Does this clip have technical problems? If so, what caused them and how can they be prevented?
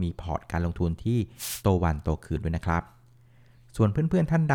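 Yes. A brief swish of static breaks over the speech from 1.36 to 1.63 s, a wireless microphone noise hit from the FM radio link fading as reflections cancel. Keeping the receiver antennas in clear line of sight and using diversity reception prevents it.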